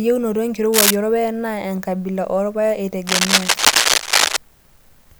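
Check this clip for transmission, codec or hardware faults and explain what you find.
Two bursts of cable scratch noise turn up in this speech, one from 0.72 to 0.96 s and a longer one from 3.07 to 4.37 s. Both sit a touch louder than the speech itself, so they're hard to miss: a dense, ragged scratching and rustling laid over the talking. The likely cause is a worn cable, connector or control being moved, with the contact resistance jumping about quickly and throwing uneven noise into the signal.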